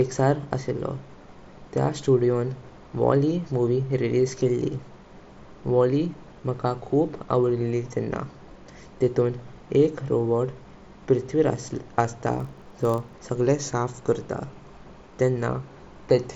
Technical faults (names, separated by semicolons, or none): block size mismatch (padded)